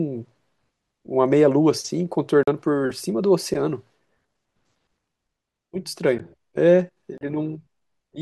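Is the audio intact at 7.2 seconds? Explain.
No. From 7.18 to 7.21 s there is a block of digital silence: 32 ms of the speech drops to silence, likely because the output buffer wasn't filled in time. Unlike a fade-out or a single click, it leaves a brief audible hole.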